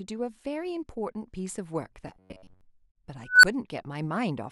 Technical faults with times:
2.08-2.61 robotic sound from repeated short buffers
3.27-3.44 unstable filter

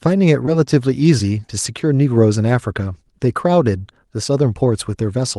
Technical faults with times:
0.45-0.49 short concealed packet loss

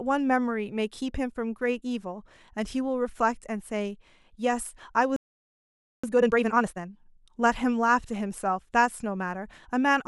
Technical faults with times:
5.16-6.04 playback stall
6.04-6.90 time-compressed catch-up

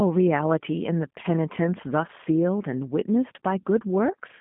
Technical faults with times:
0.00-4.41 G.729 codec

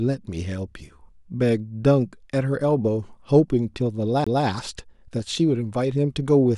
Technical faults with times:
4.24-4.27 CD skip

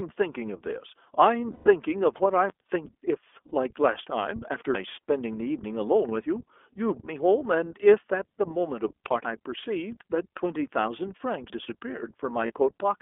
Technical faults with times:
0.00-13.01 iLBC codec
1.52-1.68 lost iLBC frames
3.48-3.52 lost iLBC frames
9.25 audio missing between chunks
12.46-12.52 lost iLBC frames

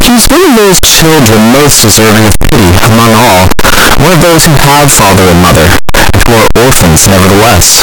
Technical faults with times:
0.00-7.83 float read as integer

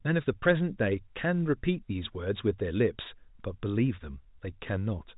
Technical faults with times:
none

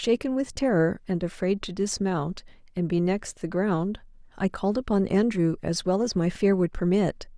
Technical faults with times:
none

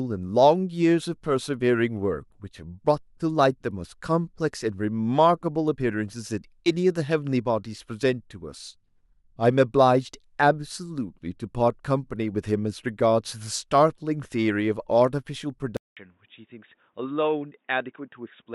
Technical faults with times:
15.77-18.55 input switched to a poorer device

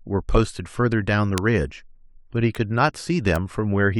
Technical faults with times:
1.38 bit error spike
2.55 bit error spike
3.36 bit error spike

